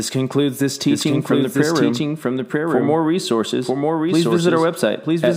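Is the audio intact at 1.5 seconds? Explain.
No. At 1.5 seconds the speech is a doubled audio track, running throughout: a second copy about as loud as the original trails by roughly a second, likely from an edit holding two copies out of step.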